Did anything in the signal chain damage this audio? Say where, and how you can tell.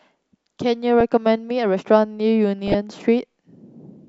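Yes: DAB burbling in the codec stage at 1.00 s and 2.68–2.75 s. Residual bit errors jolt single MP2 sub-bands, which show as isolated rectangular blotches on a spectrogram.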